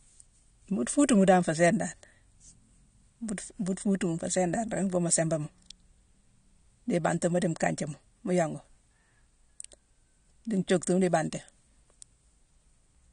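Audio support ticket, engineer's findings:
AAC compression, throughout: speech dull and warbly, nothing above 9.7 kHz. Likely a low-bitrate AAC-LC encode, fitting roughly 32 kbps, where quantisation starves the upper bands and smears sibilants.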